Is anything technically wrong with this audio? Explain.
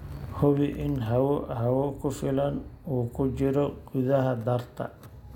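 No, nothing technically wrong can be heard here.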